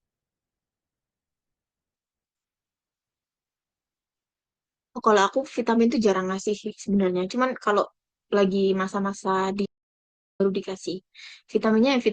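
From 9.66 to 10.40 s the speech drops to dead silence for about 0.74 s, an audio dropout to silence. Likely the input link failed while recording continued.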